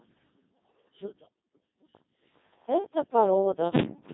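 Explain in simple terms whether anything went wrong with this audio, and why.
Codec 2 vocoder damage runs through the whole clip, from the first moment to the last. This is a low-rate digital-radio voice codec. Instead of sending the actual sound wave, it sends a rough description: pitch, whether the sound is voiced, loudness, and the overall tone shape. The receiver rebuilds the speech from simple sine waves, so the result sounds robotic and buzzy. The damage here is heavy, and nothing above 3.8 kHz survives, which makes it sound narrow and muffled.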